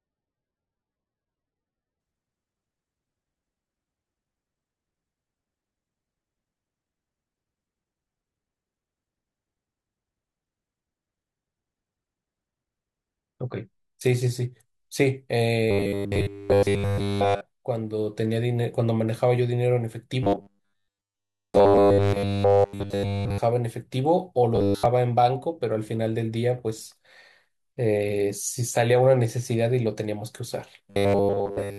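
For the first 2.0 s, the speech sounds dull and smeared, with thin, swirly treble. The sound points to an adaptive stream starting at a low bitrate, near 18 kbit/s MP3. It then steps up cleanly, without a gap, to a version fitting 128 kbit/s.

Robotic sound from repeated short buffers appears from 15.71 to 17.42 s, 20.23 to 23.40 s, 24.56 to 24.86 s and 30.90 to 31.78 s. The speech becomes a rigid, metallic buzz at 100 Hz that loosely tracks the words. Likely, audio arrived too late and the last 10 ms kept being replayed. In the first three stretches nearly everything heard is repeats. In the last, about seven tenths is.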